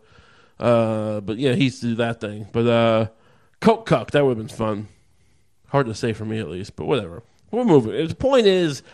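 Throughout, the speech sounds dull and granular, with gurgling; the likely cause is MP2 compression at a rate fitting about 80 kbps, and a spectrogram shows upper sub-bands flickering on and off. At 4.60 to 4.69 s, just after "that would have been", DAB burbling adds short blips of noise as bit errors reach the audio data, appearing on a spectrogram as isolated patches in single bands. It returns at 6.65 s, between "say for me at" and "but whatever".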